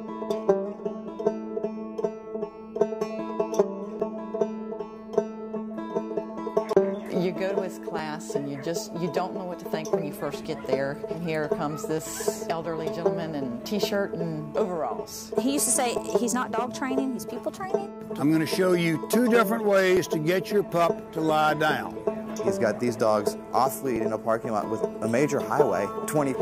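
Six tiny skips break the audio at 4.00, 7.99, 11.98, 15.98, 19.97 and 23.96 s. Each removes only a few milliseconds, and the two sides butt together with no silence between them. The steady spacing of about 4 s marks this as audio missing between chunks, likely from a recorder dropping a sliver at each chunk boundary. That clockwork regularity sets it apart from network dropouts, which fall at irregular moments.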